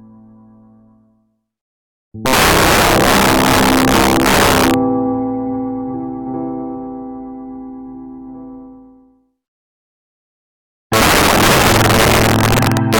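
From 2.26 to 4.74 s, and again from 10.93 s to the end, integer overflow: peaks pushed about 9 to 10 dB too hot wrap to the opposite sign, cracking violently.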